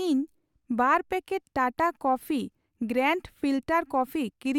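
Speech recording with no audible dropouts, clicks, distortion or timing faults anywhere in the clip.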